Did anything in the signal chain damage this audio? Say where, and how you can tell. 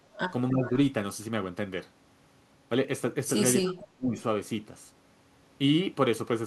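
Yes. Speech suppressed in double talk, at the call-processing stage, pulls the speech down at 0.09–0.17 s, 0.5–0.73 s and 3.64–4.17 s, by up to about 20, 15 and 30 dB. These are level dips of varying length, not clean fixed-size gaps as with packet loss, so an echo canceller likely ducked the talker during overlap.

Echo leak, also in call processing, shows at 0.17–0.33 s and 0.66–0.71 s as a faint copy about 20 and 15 dB below the speech, arriving 301 ms late. Room reverberation would be a smooth decaying tail. This is a discrete, delayed scrap, likely loudspeaker pickup that the far end's canceller missed.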